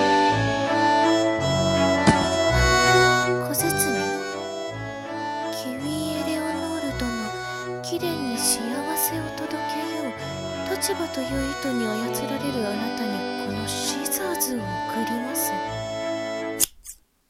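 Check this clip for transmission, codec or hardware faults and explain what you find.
Nothing in the recording points to a transmission, codec or hardware problem. The audio holds steady throughout, with no event that stands out as damage.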